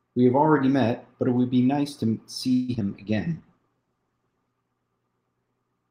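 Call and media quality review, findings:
Repeated packet loss (robotic sound), 2.53 to 2.82 s: choppy stretch. Network/jitter buffer path, with several holes back to back. Concealment stretches the last sound over about 58% of the span. The longest gap is 151 ms, and short bits just drop out.

Call bitrate drop, 2.93 to 4.59 s: rough, watery and muffled. Encoder side after the bandwidth estimate fell, which sounds like roughly 32 down to 12 kbps and bottoms out for about 1.5 s. Top end is cut from 20 kHz to 8 kHz, so it goes dull.

Jitter buffer slow-down, 3.29 to 4.04 s: delivery drags at 92% speed, same pitch, drawn-out sounds. Receiver jitter buffer was refilling its reserve by repeating single pitch periods and pause fragments, adding about 70 ms. It overlaps the low-bitrate stretch.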